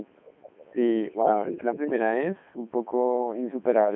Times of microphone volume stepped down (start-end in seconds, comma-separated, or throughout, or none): none